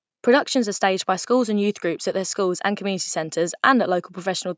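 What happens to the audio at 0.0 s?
Nothing goes wrong at 0.0 s: the audio is intact, and the only thing audible is the normal band-limiting of call microphone processing, with the lowest bass trimmed and nothing above 8 kHz.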